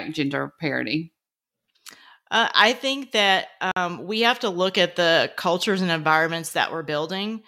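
A speech recording with one gap at a join of encoded pieces: between "I think that" and "we have to look", the sound drops to silence from 3.72 to 3.76 s, about 49 ms, and then resumes exactly where it stopped. That is the sign of separately encoded segments butted together untrimmed, the encoder's start-up delay and final-frame padding left in. A dropout or packet loss would cut away part of the speech instead. Here nothing is missing, and the gap's edges are smeared by the codec.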